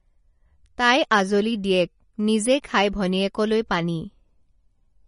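It's a short speech recording, and the whole thing carries plainly audible codec damage, most likely MP3 compression at a low bitrate, which fits something around 37 kbps. There's nothing above about 10.5 kHz, where the encoder chopped off the treble to save bits, and the weaker frequency detail flickers in and out between frames, giving that watery, swirly texture. S sounds turn metallic and chirpy, and the sharper onsets come across smeared.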